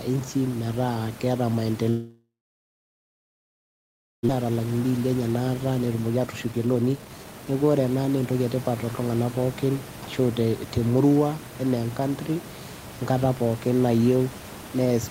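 Packets stopped arriving from 1.89 s to 4.31 s, likely a long network dropout. The last sound is dragged out as a fading buzz, then about 1.9 s of near-silence leaves only the room noise, some 15 dB below the speech, and about 1.6 s of speech is lost outright.

Once audio resumed, the jitter buffer held too much, so the receiver cut out pitch-period-sized pieces to shed the excess. This jitter buffer speed-up runs from 4.43 s to 5.29 s at 110% speed, then from 5.72 s to 8.47 s at 123%, removing roughly a tenth of a second and then most of a second. The speech sounds hurried while its pitch stays unchanged.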